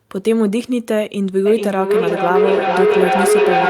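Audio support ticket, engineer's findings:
Feedback howl from 1.46 s to end of speech clip. Tone near 400 Hz, loop repeating roughly every 400 ms, peaking about 4 dB above speech. Mic-to-speaker loop gaining each pass. Spectrogram: single bright horizontal band. Waveform: swelling envelope, not decaying.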